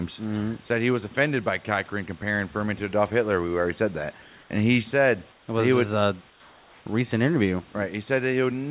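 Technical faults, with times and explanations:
0.68–0.70 s, sound dropped by the voice detector: For about 20 ms the sound gives way to a flat, steady hiss. Roughly 10 ms of real sound is lost in that gap. The sender's voice detector likely judged a quiet stretch to be background and stopped sending. The receiver filled the hole with synthetic comfort noise. The sound returns as soon as the detector triggers again. The gap is brief, so it is heard as a tiny dropout.
4.22–4.50 s, 5.32–5.48 s and 6.30–6.86 s, comfort noise in place of the background: In these pauses the room background, about 30 dB below the loud parts, is swapped for a smooth, featureless noise. Its level drops by about 1 dB, about 6 dB and about 3 dB in turn. The longest patch lasts 560 ms. The sender likely stopped transmitting during silence and sent only noise-level updates. The receiver synthesised roughly matching noise, which loses the real background's texture, inside the narrow band of the phone-quality call path.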